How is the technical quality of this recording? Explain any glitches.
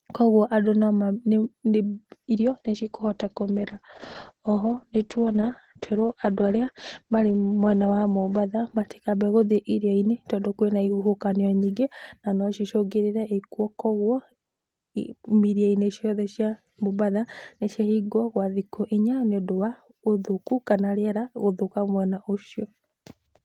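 The quality is hurt by one call bitrate drop, from 2.29 to 9.85 s. The audio turns rough and muffled as the top end falls from 20 kHz to 8 kHz. This fits the call encoder cutting from 32 to 9 kbps.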